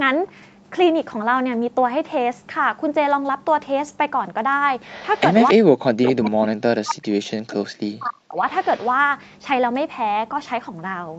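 From 4.87 to 5.53 s, a faint delayed copy of the talker follows the voice, about 20 dB down and trailing by 282 ms. This echo leak likely comes from a far-end loudspeaker whose echo canceller let residue back. The same echo returns at 6.04 to 6.3 s, louder at about 10 dB down. It returns again at 8.61 to 8.9 s, barely audible at about 30 dB down.

From 5.53 to 7.06 s, and again from 7.36 to 8.41 s, the talker's voice dips and breaks into pieces. At its deepest it falls by around 40 dB. This is speech suppressed in double talk. Both sides were likely talking at once, and the echo canceller turned the talker down along with the echo.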